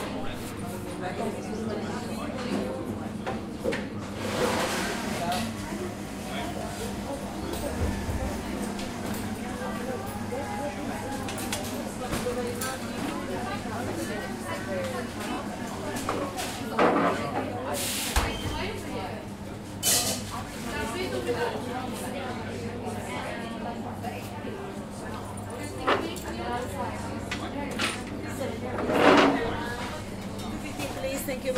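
At 4.39–4.41 s and 8.33–8.35 s, lost LE Audio frames leave 20 ms gaps, which fits two 10 ms frames. The LC3 decoder fills them by repeating the last spectrum with randomised signs, producing a brief noisy smear. At 15.33–15.38 s, a 50 ms loss smears longer.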